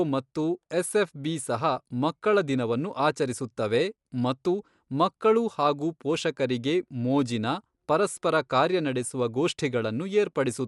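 The speech was likely squeezed through Dolby Digital compression at a low rate, which fits a 64 kbps stream, so the encoder cut the band off near 11.4 kHz and left many frequency lines to dither noise. Throughout, the audio sounds dull, with a rough, fluttering grain.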